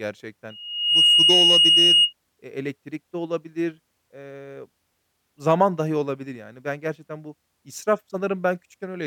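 A speech recording is marred by loudspeaker feedback squeal from 0.50 to 2.13 s. A single tone near 2.9 kHz swells out of the sound over about half a second. It then sits roughly 10 dB above the speech until it stops. The microphone was picking up the loudspeaker it fed. At 2.9 kHz the loop gain went above one, so that frequency kept reinforcing itself.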